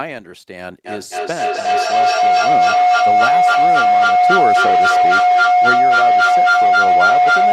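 A speech recording is overtaken by feedback howl from 0.86 s to the end: a tone around 700 Hz swells until it sits about 11 dB above the speech, pulsing roughly every third of a second. Sound from a loudspeaker is reaching a microphone on the same call and coming back louder on each pass. Instead of dying away, the repeats narrow onto the frequency this loop favours, and the pulse follows the loop's delay. Nothing breaks the loop before the clip ends.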